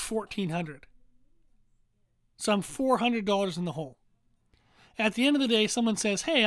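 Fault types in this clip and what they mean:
Nothing stood out on listening to this speech recording.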